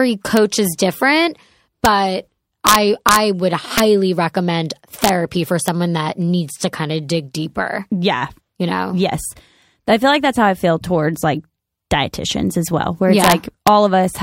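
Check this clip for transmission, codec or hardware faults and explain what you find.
The speech has integer overflow on its loudest peaks. It occurs at 0.37 s, 1.85 s, from 2.67 to 3.16 s, at 3.78 s, from 5.04 to 5.09 s, at 5.68 s, from 13.24 to 13.32 s and at 13.67 s. A gain or sum exceeded the largest integer and wrapped to the opposite sign instead of being limited. Peaks exceeded the limit by up to about 5 dB. Each one flips across the full range and produces a violent crack, much sharper than clipping.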